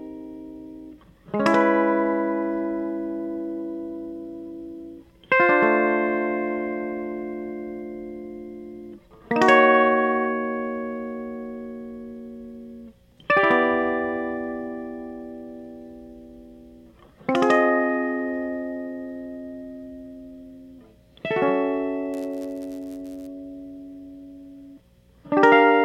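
A block size mismatch with padding occurs from 22.13 to 23.27 s: one stage hands over blocks shorter than the next stage reads, and zeros fill the remainder. The music takes on a buzz near 91.5 Hz and runs at 0.996 times speed, its timbre unchanged.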